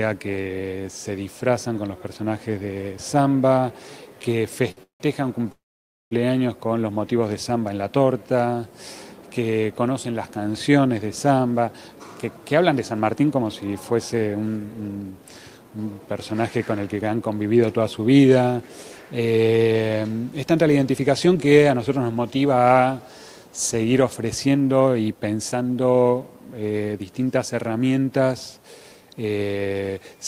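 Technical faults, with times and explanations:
4.71 to 4.79 s: short stall from a late packet. A packet arrived late and the jitter buffer emptied, so the receiver stretched the last sound for about 55 ms until it came. Nothing is lost. Unlike a freeze, there is no silence, only a briefly held sound with a faint buzz or dip.
4.83 to 5.02 s and 5.52 to 6.13 s: call audio freeze. The audio stops and resumes where it left off, with a gap of 170 ms and then 591 ms. A brief buzzy continuation fades into silence lasting 130 ms and 540 ms. The likely cause is packets held up in transit. The silence is what separates this from a short stall.
11.31 to 17.16 s, 21.27 to 22.67 s, 24.80 to 25.52 s: jitter buffer speed-up. The buffer held more audio than it aims for, so the receiver trimmed pitch-period-sized pieces repeatedly and played about 10% faster, removing roughly half a second in the first stretch. 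The pitch is unchanged and the audio sounds hurried. Nothing goes silent.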